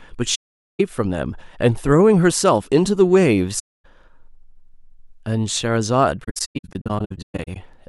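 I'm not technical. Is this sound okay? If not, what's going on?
No. AAC frame loss with muting cuts holes in this speech at 0.35–0.80 s, at 3.59–3.86 s, and in a scattered stretch from 6.23 to 7.57 s, where about 0.73 s goes missing in short gaps, the longest roughly 150 ms. Chunks of the compressed audio never arrived, so the player filled them with silence. Because each chunk blends into its neighbours, the sound fades out and back in softly, leaving dropouts rather than harsh breaks.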